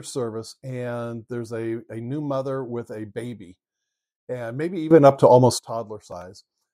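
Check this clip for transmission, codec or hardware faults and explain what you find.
One fault stands out in this speech clip.

Sudden gain jump, 4.91 to 5.59 s, just after "and maybe": the level leaps by about 14 dB from one sample to the next, likely a digital gain change applied without a ramp. The speech and the background noise rise together, then drop back.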